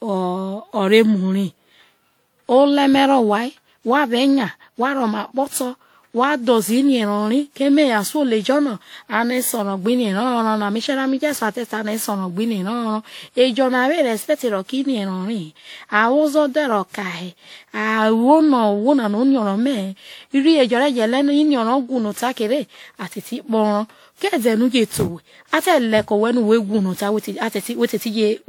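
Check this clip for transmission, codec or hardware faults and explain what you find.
The speech carries generation loss throughout the clip. It sounds swirly, hollow and smeared, with blurred consonant onsets, which points to about seven passes through a WMA-type codec at around 96 kbit/s. Each pass likely re-quantised on a shifted frame grid, compounding noise. A spectrogram would show smeared transients below a cutoff near 20.1 kHz.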